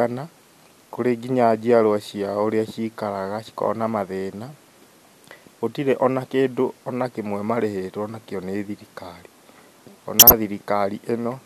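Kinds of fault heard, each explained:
Corrupt frame decoded: damaged compressed frames were played as received, putting energy at the wrong frequencies across a handful of frames, 10.14 to 10.33 s.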